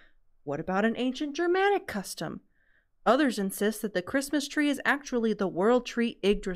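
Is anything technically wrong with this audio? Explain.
No, nothing technically wrong can be heard here.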